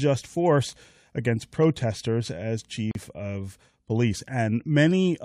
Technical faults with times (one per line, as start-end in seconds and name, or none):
2.91-2.95 gap at a join of encoded pieces